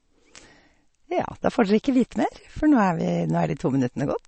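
From start to finish, the speech is dull and watery. Nothing sounds above about 8.3 kHz, so the treble is sharply cut. Quiet detail seems to flicker in and out, giving a swirly texture. S sounds turn metallic and chirpy, and consonant attacks smear. The likely cause is MP3 compression at a low bitrate, which fits roughly 39 kbps. Short of bits, the encoder drops the top band and discards weak frequency lines frame by frame.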